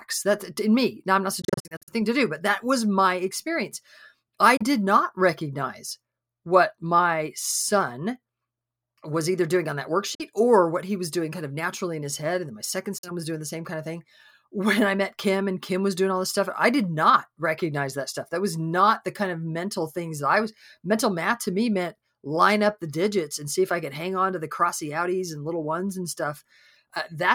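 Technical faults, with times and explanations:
1.42–1.94 s, Bluetooth dropout: after "I'm not", the sound stutters through a series of abrupt silent holes totalling about 274 ms across roughly 457 ms, the longest about 46 ms, before "to do but that". This is likely wireless packets arriving too late and being discarded, with playback resuming as if it had run on.
4.57–4.64 s, Bluetooth dropout: a brief hard-edged gap of about 31 ms cuts in after "was my experience I", and the sound picks up mid-flow at "not recognize what my". This is likely a couple of late audio packets dropped on the wireless link, leaving silence in their place.
10.15–10.23 s, Bluetooth dropout: the audio blanks for about 46 ms with sudden edges and then carries on as though nothing paused, with the skipped stretch simply missing. This is likely a short burst of lost packets that the headphones could not fill in.
12.98–13.11 s, Bluetooth dropout: after "then my second", a clipped silence of about 46 ms breaks the flow before "was doing the same" resumes. 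This is likely late or corrupted wireless packets being thrown away, so the output went mute until good data returned.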